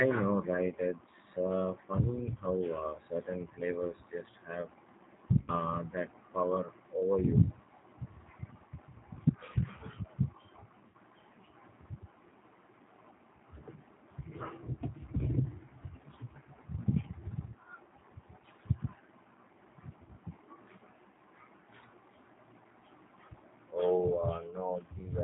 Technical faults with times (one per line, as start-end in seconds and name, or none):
0.00-25.24 G.729 codec
5.42-5.52 VoIP packet loss concealed by the speech codec
10.88-10.96 VoIP packet loss concealed by the speech codec